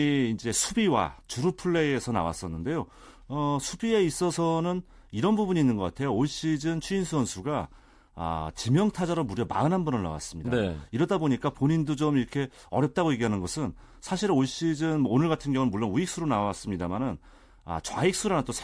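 No technical faults can be heard anywhere in this speech.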